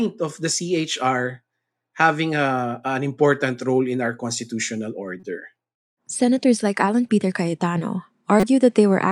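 A faint glitch at 5.20 to 5.25 s, just after "role in our constitutional", then a much louder glitch at 8.40 to 8.44 s. Both are a corrupt frame decoded: damaged compressed frames were played anyway, and misread data put energy at wrong frequencies.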